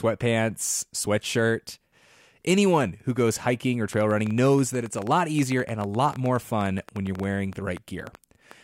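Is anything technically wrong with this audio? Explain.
Yes. A train of clicks runs from 3.93 s to 8.52 s, starting just after "who goes hiking or". Some repeating pulse, likely interference from nearby equipment or a faulty connection or power supply, injects around 40 similar clicks at an uneven 8.7 per second. They tick audibly over the speech and through its pauses, peaking a few dB above it.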